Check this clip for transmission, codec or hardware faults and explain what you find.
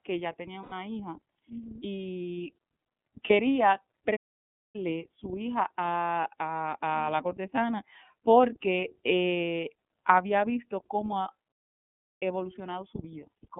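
Yes, the clip has three kinds of fault: iLBC coding throughout, two lost iLBC frame events, and two playback stalls.

The whole speech clip passes through the iLBC codec, which codes each frame independently and restricts the band to about 150 Hz to 3.5 kHz. The result is muffled, slightly rough, synthetic speech, consistent with the 13.33 kbps, 30 ms frame mode.

Lost iLBC frames occur at 0.62–0.72 s, between "que ya tenía" and "hija y", and again at 3.27–3.31 s. The decoder fills the 90 ms and 30 ms gaps by repeating a noisy pitch cycle, which sounds like a brief buzzy held vowel before the speech recovers cleanly.

Playback stalls occur at 4.16–4.76 s, just before "su hija", and at 11.52–12.23 s, right after "eh había visto cómo". The audio drops into silence for about 0.58 s and 0.69 s mid-flow, likely because the player ran out of buffered data, and then resumes.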